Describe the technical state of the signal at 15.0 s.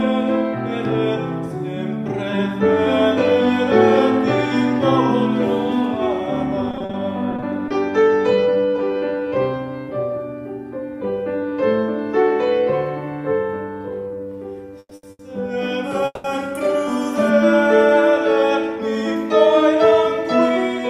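At 15.0 s a sound is held on too long, with a slight buzz or dip, from 14.95 to 15.05 s. This is a short stall from a late packet: a packet was not there when due, the jitter buffer ran empty, and the receiver stretched the last sound for about 80 ms until it arrived. Playback then resumed from the same place, so nothing is lost, but everything after now runs 80 ms later.

Just before it, from 14.79 to 14.93 s, the sound continues as a fading buzz or hiss that drops to silence for about 50 ms before resuming. This is a call audio freeze, likely caused by packets held up in transit that emptied the jitter buffer. The receiver covered 120 ms by extending the last sound and then continued where it stopped, so no audio is missing, but a 120 ms gap has been inserted into it.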